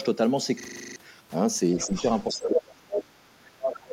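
From 0.6 to 0.96 s the speech is replaced by a system hang loop. A single 40 ms slice repeats nine times at a 25 Hz rate, giving a rough buzzing stutter while the driver stalls on its ring buffer. Roughly 0.4 s of real audio is lost.

Between 1.76 and 1.93 s the talker dips briefly, by a few decibels for a fraction of the segment. This is likely speech suppressed in double talk, with the echo canceller ducking the near end as the far end starts.

From 1.78 to 2.46 s the other side's voice leaks through at a low level, roughly 15 dB under the talker. The canceller likely failed to remove the loudspeaker echo fully.

From 2.33 s to the end the speech is suppressed again, far more heavily. The level falls by about 35 dB for around 1.5 s, so the talker nearly vanishes, likely from the double-talk suppression continuing.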